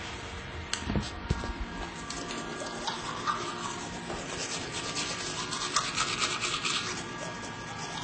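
From start to finish the sound is band-limited, with nothing above about 9 kHz, and carries two layers of coding damage at once, the artefacts of each codec heard together. This likely comes from transcoding between lossy codecs, a low-rate MP3-style encode followed by HE-AAC.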